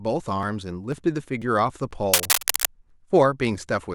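Right from 0.43 s there's a tiny skip roughly every half second, at 0.43, 0.92, 1.42 and 1.91 s. That's audio missing between chunks, likely from a processor dropping a few milliseconds at each block join. Then from 2.13 to 2.69 s there's cable scratch noise, a rough rustling burst about as loud as the speech, likely a worn connector being moved. Another skip lands inside it at 2.40 s, and the pattern continues at 2.90 and 3.39 s.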